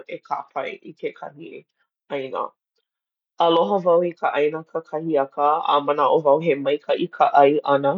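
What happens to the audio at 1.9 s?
Nothing goes wrong at 1.9 s: the speech runs through that moment intact, with no dropout, click, distortion or other fault.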